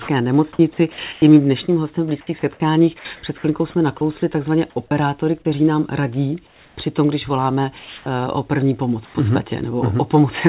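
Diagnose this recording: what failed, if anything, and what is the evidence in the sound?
Sound chopped by the voice detector, 0.53 to 1.22 s: the speech breaks up repeatedly, with about 210 ms of it replaced in pieces by synthetic noise. This is call processing, likely the sender's voice activity detector toggling on and off and the receiver filling the gaps with comfort noise. On a spectrogram, the harmonic speech striations alternate with short blocks of smooth, uniform noise. The waveform shows the envelope dropping abruptly into a low, even band several times.

Sound dropped by the voice detector happens at 2.99 to 3.05 s (60 ms), at 4.88 to 4.91 s between "chvilkou jsme nakousli takzvaně" and "kteří nám radí" (30 ms), and at 7.79 to 8.06 s just after "tom když voláme" (270 ms). Each time, the speech gives way to steady noise and then resumes. The likely cause is that the detector classed the quieter speech as background and stopped sending. 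A spectrogram shows speech energy vanishing into a featureless noise patch.

Onset clipped by the voice detector, 4.74 to 4.76 s: about 20 ms of the start of a sound is missing, so it begins abruptly without its soft attack. The detector was likely slow to trigger, so the first frames were never sent. On the waveform, the envelope jumps straight from the noise floor to full level. On the spectrogram, the onset edge is vertical and sharp instead of tapered.

Comfort noise in place of the background, 6.47 to 6.77 s between "kteří nám radí" and "tom když voláme", and 9.05 to 9.14 s: the real background in these pauses is swapped for smooth synthetic noise. This is likely discontinuous transmission during silence. The first patch is about 3 dB quieter than the surrounding background and the second about 1 dB louder. A spectrogram shows the detailed background texture turning into a uniform, stationary wash. 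Throughout, the spectrum stops at 4 kHz, consistent with a G.711 narrowband call path.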